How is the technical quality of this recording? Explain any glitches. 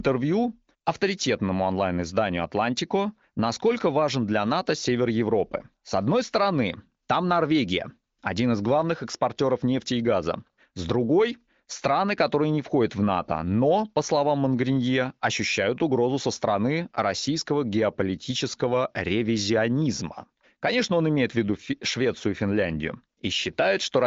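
No glitches or faults can be heard here.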